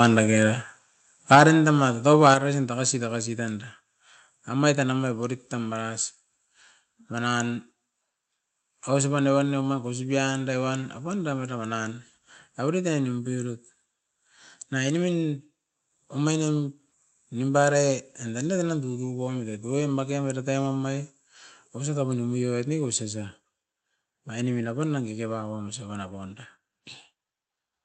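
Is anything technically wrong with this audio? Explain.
Yes. In the first two and a half seconds the microphone level is unstable: the input clips twice, and the level drops suddenly three times.

Microphone overload, 1.31 to 1.42 s and 2.26 to 2.33 s, just before "tagasi tagasi": the input volume was likely set too high, driving peaks about 6 dB and then about 2 dB past the converter's limit. Their flattened tops, roughly 7% and 2% of samples, give those syllables a harsh, crackly edge.

Microphone volume stepped down, at 1.02 s, 1.35 s and 2.34 s, the last just before "tagasi tagasi": the call software likely reacted to loud or clipped input by cutting the device's input volume in single steps of about 3, 4 and 5 dB. Voice and background drop abruptly each time, the later two right after distorted peaks. The call codec's top-end limit is around 8 kHz.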